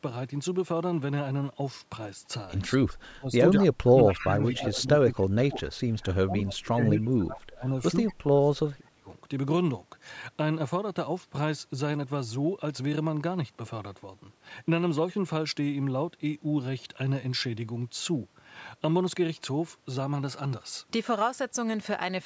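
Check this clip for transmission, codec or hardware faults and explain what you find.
Two kinds of fault appear in the first nine seconds of the speech, both pointing to echo cancellation struggling while both ends of the call talk at once.

Speech suppressed in double talk occurs at 2.76–2.87 s, 3.05–3.43 s, 3.62–4.4 s, 4.56–5.66 s, 5.88–7.74 s and 8.1–9.06 s. The likely cause is the echo canceller failing to tell the near talker apart from loudspeaker echo and attenuating everything. The voice dips by roughly 20 to 40 dB, deepest in the 3.05–3.43 s stretch.

Echo leak appears at 4.15–4.25 s and 4.42–4.57 s as brief scraps of a delayed copy, about 215 ms behind the voice and about 20 dB quieter. These are likely residue that the far end's canceller missed when its microphone picked up its loudspeaker and sent it back. The band limit near 8 kHz belongs to the call's microphone processing and is not a fault.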